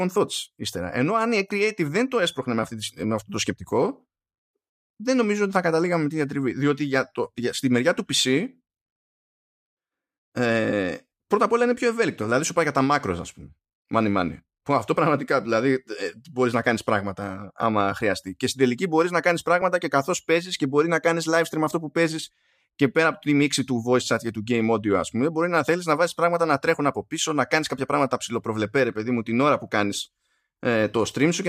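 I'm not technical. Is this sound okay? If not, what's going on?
No. At 19.62 s, right after "τελική μπορεί να κάνει", the speech freezes for about 3.6 ms. This is an underrun with held sample. The playback buffer briefly ran dry, so the output held its last value. Nothing was lost, and it resumes softly at "και καθώ παίζει και".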